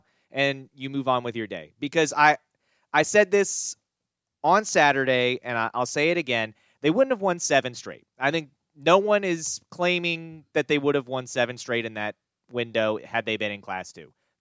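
No technical faults can be heard anywhere in the recording. Nothing in the audio stands out as a problem that needs a time mark.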